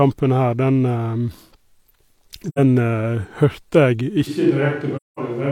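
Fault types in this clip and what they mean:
AAC frame loss with muting: The speech drops into silence twice, at 2.48 to 2.59 s (about 85 ms, which fits two lost frames) and at 4.96 to 5.19 s (about 213 ms, which fits roughly five). The decoder zeroes the missing spectrum, and the overlapping windows fade the sound out and back in. This gives soft-edged holes, unlike a hard sample dropout, which cuts abruptly and snaps.
switch to a distant microphone: From 4.29 s to the end, the speech suddenly turns roomy and hollow, with thinner bass. It is about 5 dB quieter, and room noise now sits roughly 40 dB below the speech. The likely cause is the recording falling back from the close microphone to one further away. Added reverb would not cut the level, and a plain gain drop would keep the tone and noise floor unchanged. This change alters all three at once.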